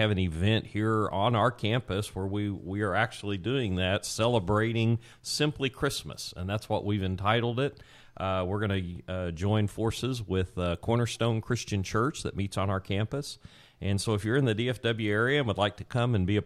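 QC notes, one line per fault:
No faults heard anywhere in the speech.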